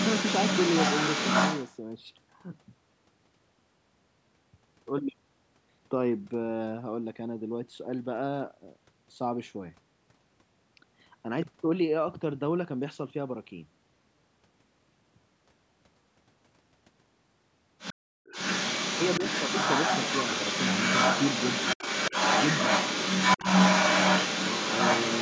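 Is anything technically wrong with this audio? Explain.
Yes. Two kinds of fault can be heard.

From 0.0 to 1.76 s, a second voice sits in the mix at roughly the same level as the main talker. It returns briefly from 17.78 to 17.94 s, around 10 dB quieter. From 18.25 s to the end it is back, now roughly 5 dB louder than the talker. This is the other side's voice leaking through. The likely cause is the talker's loudspeaker feeding the microphone, with the echo canceller failing to remove it.

From 17.94 to 18.25 s, the room sound drops away for about 300 ms. The deepest dip is about 40 dB. This is background gated by the echo canceller. While the far end was playing, the canceller turned the microphone down hard. The background returns once it releases, just as the leaking voice comes back. The audio carries nothing above 8 kHz, which fits the band of the call's microphone processing.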